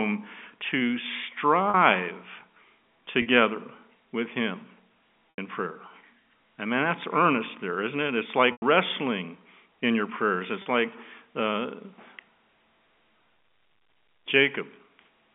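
Packet loss with pitch repetition occurs at 1.70, 3.22, 5.36, 8.52 and 10.62 s, with gaps of 40, 40, 80, 100 and 40 ms that point to runs of 20 ms packets going missing. The receiver fills each gap by looping the last pitch period, so the shorter gaps sound like a brief buzzy hold, and the 80 and 100 ms gaps fade toward silence before the sound cross-fades back in.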